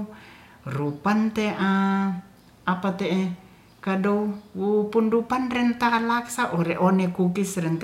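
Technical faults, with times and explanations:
No technical faults are audible anywhere in this recording.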